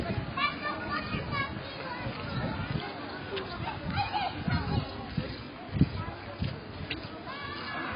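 From start to end the sound is dull and smeared, with nothing above 5 kHz and a warbling, fizzy texture on sustained parts, which points to AAC compression at a very low bitrate, likely around 16 kbps. A plain low-pass filter would not warble like this.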